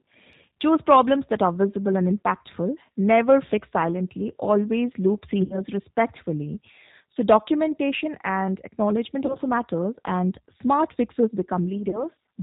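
The whole recording passes through the G.729 codec at 8 kbit/s, and the damage is plainly audible. Nothing above 4 kHz survives. The speech is built from a vocal tract model and a few pulses per frame, so it sounds rough and slightly synthetic.

At 5.44 s, VoIP packet loss concealed by the speech codec appears. About 60 ms of audio is missing, which fits two lost packets. The decoder repeats its last pitch and filter with falling gain. That gives a fading buzzy or noisy smear until 5.61 s. Shorter gaps of about 30 ms, which fit single lost packets, occur at 9.26 to 9.36 s and 11.90 to 12.05 s. Each frame builds on the one before, so the sound stays weak after packets resume.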